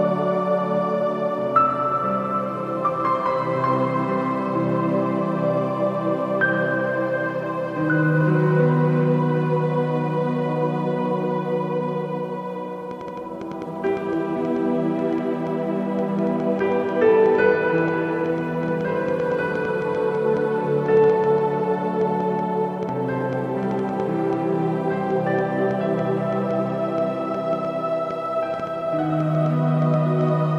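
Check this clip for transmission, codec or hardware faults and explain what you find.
A hardware-type fault is present: a train of clicks running from about 12.9 s to 30.3 s. Around seventy similar pulses arrive at roughly 4.55 per second, spaced irregularly and peaking about 5 dB above the sound, so they tick through quiet gaps as well. The likely cause is external interference or a struggling interface injecting pulses. Unlike dropouts, nothing goes missing, and their uneven spacing and consistent shape set them apart from evenly periodic buffer glitches.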